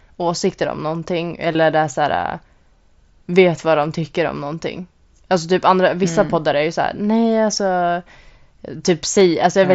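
Swedish speech carried over an mSBC Bluetooth headset link, with its light grain and 8 kHz ceiling, shows concealed Bluetooth headset packet loss. Audio went missing at 1.53 s, right after "åsikter om någonting" (about 15 ms, which fits two lost frames), and at 4.02 s, just before "om någonting" (7.5 ms). Each gap was patched with repeated recent waveform, and the single lost frame at 4.02 s is nearly hidden. Dropped samples also appear at 3.83 s, after "vet vad", and at 9.21 s. Each is likely a handful of missing samples that makes the waveform jump, heard as one sharp click.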